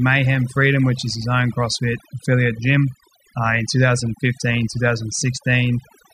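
Overdone noise removal runs throughout: the suppression is set too hard, cutting frequency bands near the noise floor, leaving twinkling specks in silence.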